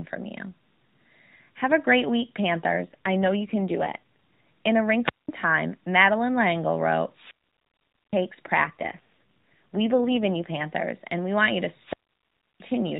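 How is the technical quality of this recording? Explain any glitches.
The recording is narrowband mobile-phone speech, with nothing above 4 kHz, and shows two kinds of glitch: two AMR rate drops and three wireless microphone squelch dropouts.

The AMR rate drops run from 2.82 to 3.99 s, just after "a great week", and from 8.64 to 10.65 s, ending just before "and we want you". The sound fits the codec falling from its 12.2 kbps mode to around 5.9 kbps, with bits moved into error protection. The voice turns buzzier and more synthetic, then recovers. Unlike a dropout, the band and level hold steady with no gap.

The wireless microphone squelch dropouts fall at 5.04 to 5.29 s, 7.12 to 8.25 s, and 11.78 to 12.68 s, the last just after "we want you to". Each time, the radio link fades until the receiver's squelch mutes the output, for about 0.2 s, 0.82 s and 0.67 s. A rise of hiss leads into near silence before the sound returns. 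The true holes set these apart from the codec's tonal roughening.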